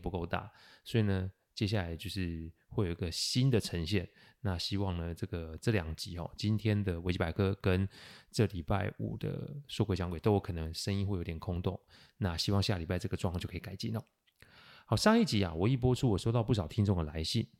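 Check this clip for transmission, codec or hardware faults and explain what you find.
I hear no faults anywhere in this speech recording.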